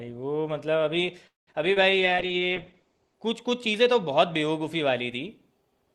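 A speech recording on a call path, with a run of faults between about 1.3 and 3.2 s. From 1.27 to 1.49 s the sound stops for about 0.2 s, mostly silence after a brief fading tail, then resumes where it left off with nothing lost. This points to a likely call audio freeze, where delayed packets drained the jitter buffer. It differs from packet loss because the audio is paused, not cut. Short concealed packet loss follows at 1.53–1.56 s and 1.74–1.78 s. Each is a quick smear or wobble where about 20 ms never arrived and was filled in by continuing the preceding sound. It is far briefer than the freeze and removes material instead of delaying it. From 1.91 to 3.22 s a call bitrate drop makes the speech rough and muffled. The top end narrows from about 12 kHz to 8 kHz, which fits Opus falling from roughly 32 to 11 kbps. The change is a sustained loss of quality rather than a break in the audio.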